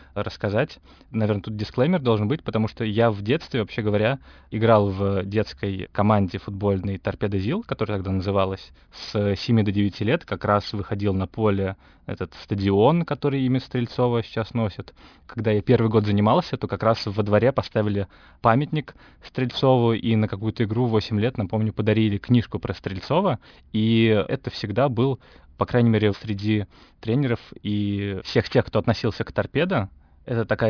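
Throughout, aliasing: the speech was downsampled without filtering first, so energy above 5.5 kHz folds back as gritty, metallic sibilance about 25 dB down.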